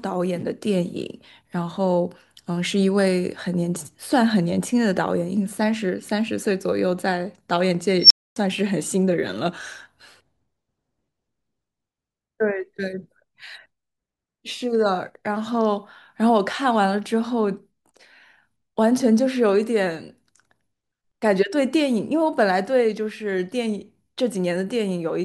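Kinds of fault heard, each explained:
Unstable filter: a recursive filter whose output grows without bound. At 7.99 s a squeal around 5 kHz swells within 115 ms, clips, then cuts to 260 ms of silence as the filter resets; acoustic feedback builds more slowly and never drops out.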